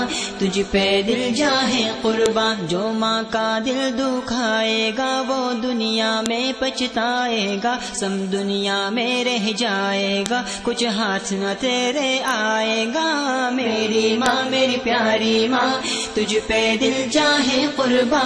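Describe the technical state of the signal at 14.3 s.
A file header played as audio sits at 14.26 s: a single sharp, loud click lasting about a millisecond. It comes from a junction where separate WAV pieces, which fits pieces about 4 s long, were joined or streamed with each one's header left in place. Those few dozen bytes of metadata are read as sample values, so they burst out as a snap unrelated to the surrounding sound.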